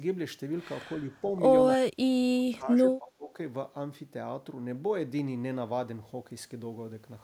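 The speech dips three times: gently at 0.94 to 1.26 s, by a few decibels; sharply at 1.77 to 2.12 s, falling about 30 dB to near silence; then for about a second from 2.34 to 3.36 s, sinking about 20 dB. This is speech suppressed in double talk, likely from an echo canceller that, with both sides speaking at once, mistook the local talker for loudspeaker echo and turned it down.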